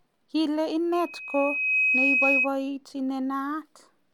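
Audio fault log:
0.93 to 2.49 s, loudspeaker feedback squeal. A single tone at 2.5 kHz rises out of the speech. It swells over about a second and peaks roughly 5 dB above the speech level. It then ends at 2.49 s. A microphone is picking up the loudspeaker it feeds. At 2.5 kHz the loop gain exceeds one, so that frequency feeds itself and grows each time round. The result is a single tone that swells into a squeal.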